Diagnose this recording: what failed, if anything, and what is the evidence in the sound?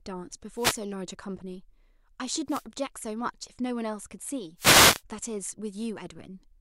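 Wireless microphone noise hits in the analogue radio link: static bursts at 0.54–0.81, 2.47–2.66 and 4.57–5.02 s, as reflection fades let FM receiver noise cover the speech.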